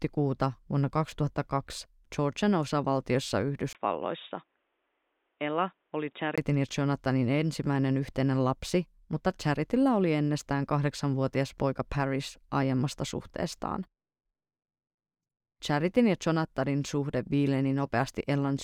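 From 3.73 to 6.38 s the speech turns dull, with nothing above 3.8 kHz, somewhat quieter, after a 20 ms gap: likely an input switched to a poorer device.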